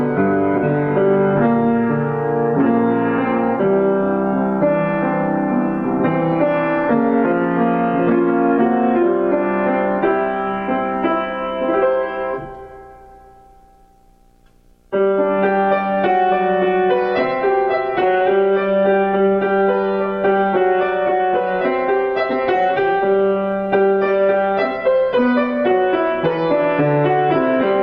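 Video or display buzz runs throughout: a 60 Hz field-rate buzz with hash above it, coupled from a screen or video cable, sitting roughly 40 dB below the signal.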